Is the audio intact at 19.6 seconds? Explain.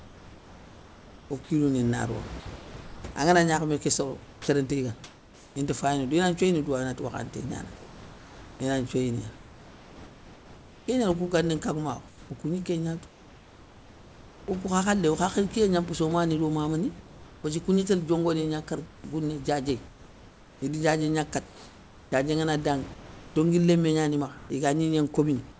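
No. From 18.86 s to the end, the room background that sits about 23 dB below the speech drops out during the pauses. In its place is a steady, smooth hiss with none of the room's texture, totalling about 2.2 s. This is likely comfort noise in place of the background: the sending side stops transmitting when no speech is detected, and the receiver synthesises featureless noise roughly matched to the background level until speech resumes.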